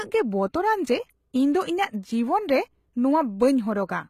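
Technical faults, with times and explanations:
Throughout: HE-AAC compression. The treble sounds rebuilt rather than recorded. S sounds turn gritty and metallic where copied upper bands miss the real harmonics, and nothing is heard above 14.9 kHz. The plainly audible damage likely comes from spectral band replication at around 20 kbps.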